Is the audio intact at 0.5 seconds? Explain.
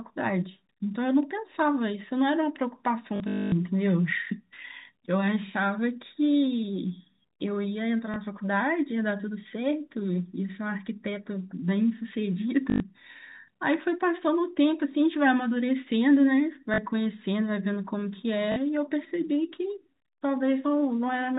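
Yes, the speech at 0.5 s is intact, carried through G.711 telephone coding with its 4 kHz bandwidth limit and no fault at that moment.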